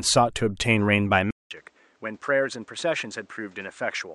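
At 1.31 s the speech cuts to silence for about 0.2 s, then returns duller, quieter by roughly 10 dB, with nothing above 9 kHz and a faint new background noise sitting roughly 35 dB under the speech. It stays that way to the end. This is likely an input switched to a poorer device in mid-recording: the replacement microphone or headset path has a narrower band, its own tone and level, and its own noise floor.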